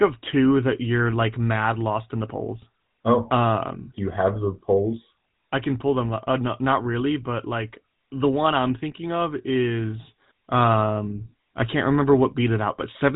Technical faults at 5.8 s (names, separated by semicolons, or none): GSM full-rate codec